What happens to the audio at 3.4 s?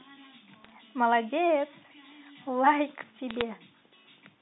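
Bit errors on a digital phone line occur from 3.31 to 3.42 s. On this G.711 A-law connection, which limits the speech to about 250 Hz to 3.7 kHz, a small fraction of transmitted bits, roughly a few in every thousand, arrive flipped. Each flipped bit alters a single 8-bit sample, and when the sign or a high-order bit is hit, that sample jumps sharply. The result is a brief burst of sharp ticks and crackle laid over the speech.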